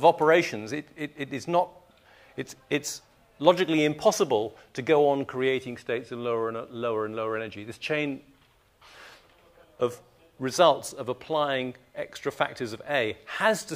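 No dropouts, clicks, distortion or other technical faults turn up anywhere in the recording.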